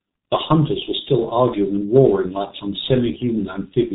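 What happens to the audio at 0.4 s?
At 0.4 s you're hearing the G.723.1 codec, and it isn't a blip at that moment: it runs through the whole clip. The speech is squeezed into a very low bitrate, which fits about 6 kbit/s, and nothing above 3.8 kHz survives. The codec also updates its voice model in coarse 30 ms frames, so the damage is heavy. The result is muffled and hoarse, with consonants smeared instead of crisp.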